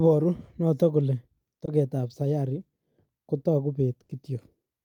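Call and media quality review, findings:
Short concealed packet loss, 1.65–1.69 s, right after "notok kole": brief smear. Receiver decoder concealment extended the last sound over about 20 ms of missing audio, then blended back. Too short to decay into a buzz.

Burst of packet loss, 4.03–4.11 s: held buzz or fading hiss, then audio resumes later. About 60 ms of consecutive packets were lost or late. Concealment continued and attenuated the last sound. Unlike the short loss, there is an audible fade and a jump.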